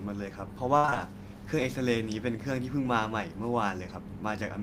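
From 0.77 to 0.97 s the speech turns choppy and robotic, with several short holes, the longest about 61 ms. This is repeated packet loss: audio kept arriving late or not at all, and each hole was patched by stretching the preceding sound, covering about 60% of that stretch.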